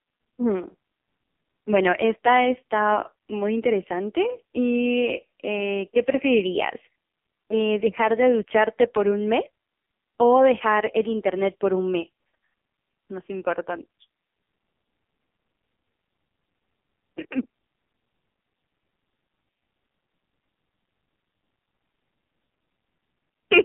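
Throughout, the speech shows heavy AMR narrowband mobile codec damage. Nothing passes above 3.7 kHz, and the line band runs from 150 Hz to 3.5 kHz. The buzzy, synthetic grain fits a low 5.9 kbps mode, which sets it apart from a plain low-pass filter's simple dullness.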